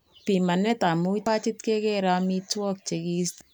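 Speech clip with two bursts of damaged data in a compressed stream: a brief glitch at 1.26 s, just before "pachit kekere", and another from 3.41 to 3.43 s. These glitches come from the decoder misreading corrupted frames and losing sync.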